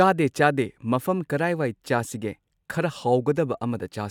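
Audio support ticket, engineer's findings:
No faults found in this speech recording. Nothing in the signal chain needs action on this ticket.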